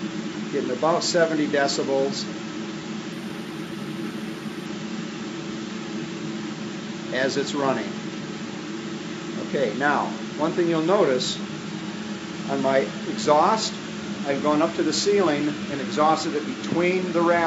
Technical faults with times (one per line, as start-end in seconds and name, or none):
3.12-4.66 imaging from linear upsampling